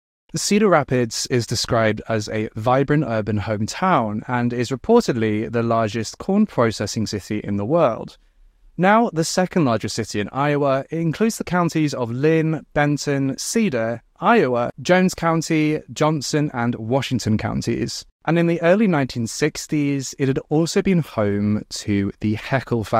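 At 3.16 s, between "described as a vibrant" and "hometown and is reportedly", and again from 20.08 to 20.11 s, just before "it had also been", a corrupt frame was decoded. In each case the decoder played a single frame whose bits were damaged, so misread gains and codes put energy at the wrong frequencies. Each sounds like a brief chirpy blip peaking around -15 dBFS. On a spectrogram it is a thin vertical smear outside the speech harmonics. On the waveform it is a short, jagged spike.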